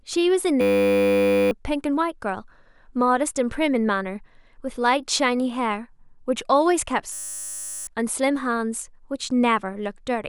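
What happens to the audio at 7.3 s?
At 7.3 s the speech sits inside a system hang loop, from 7.13 to 7.87 s. The system froze while the hardware kept replaying one 10 ms slice, so about 0.7 s is lost to a steady 100 Hz buzz. Unlike a dropout, it never goes silent.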